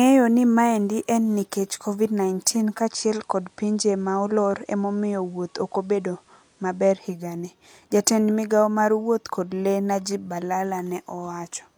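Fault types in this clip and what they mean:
Digital radio blending to analogue: between 2.49 and 7.40 s the speech cross-fades over half a second to the FM broadcast and back. The spectrogram shows a faint hiss floor roughly 40 dB down, while waveform level stays unchanged.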